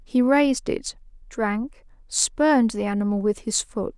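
A short speech recording with no technical faults to point to anywhere in the signal.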